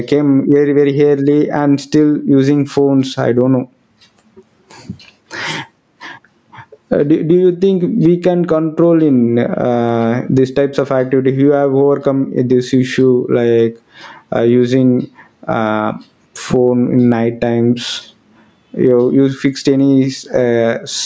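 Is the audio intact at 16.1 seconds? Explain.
No. Gain pumping is present at 16.1 s, as it is throughout the clip. The level swings by around 20 dB. The likely cause is gain set far too high for the microphone, with a fast limiter or compressor pulling it down on every loud sound. That squashes the speech into a narrow, pumping range. The call processing leaves nothing above 8 kHz, which is normal.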